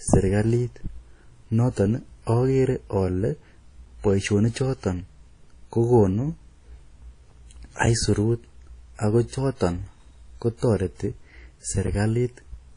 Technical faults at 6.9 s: WMA compression

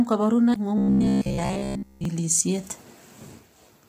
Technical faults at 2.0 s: low-delay AAC compression; robotic sound from repeated short buffers

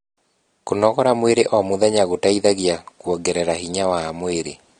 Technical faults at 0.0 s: AAC compression

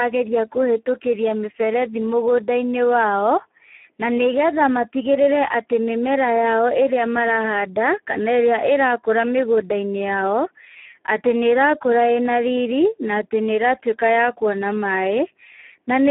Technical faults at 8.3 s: Speex codec

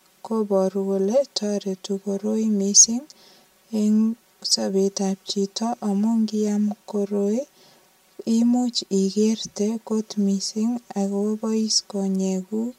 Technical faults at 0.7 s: channel delay (comb filtering)

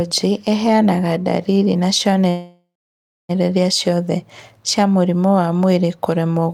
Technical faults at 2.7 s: call audio freeze

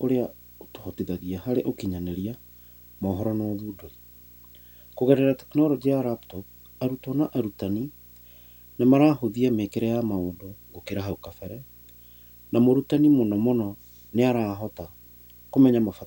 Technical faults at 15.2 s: video or display buzz

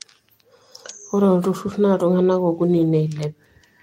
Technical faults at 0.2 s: none

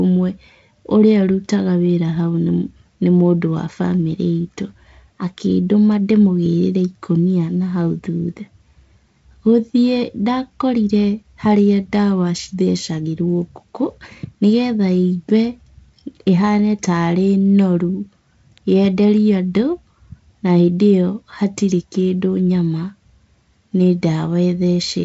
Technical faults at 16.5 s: none

